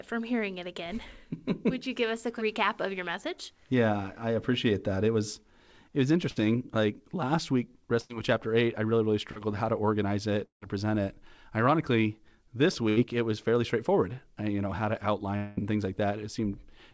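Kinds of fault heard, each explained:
Burst of packet loss: at 6.30 to 6.38 s, 8.02 to 8.11 s and 12.89 to 12.98 s, a run of lost packets left gaps of about 60 to 80 ms. The receiver stretched the last sound into a fading buzz or hiss, and the audio then picks up further along, with that stretch missing.
Short concealed packet loss: at 9.31 to 9.37 s, between "eight I really really" and "how to organize it", about 40 ms failed to arrive in time. The decoder bridged it with a continuation of the preceding sound and then blended back, leaving a brief smear.
Long network dropout: at 10.45 to 10.63 s, after "how to organize it" and before "to present it", the sound hangs on and fades to near silence. At 15.36 to 15.59 s, between "you know how to" and "and things", a 200 ms held buzz or hiss fades out. Both likely reflect a stall in arriving audio, with the lost portion never played.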